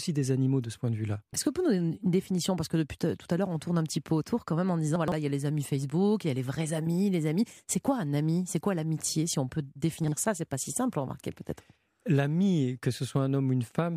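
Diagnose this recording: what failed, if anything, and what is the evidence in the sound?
Two brief jumbled moments break the speech at 4.96 to 5.12 s and at 10.04 to 10.12 s. This is chunks out of order at the buffer or packet-delivery stage. The sound is all there but resequenced, in steps that fit 40 ms chunks. In the first event one chunk plays three chunks late, and in the second one plays a single chunk late. Each misplaced chunk leaves three hard joins.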